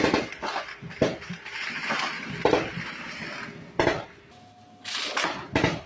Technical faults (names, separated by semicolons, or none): section at the wrong speed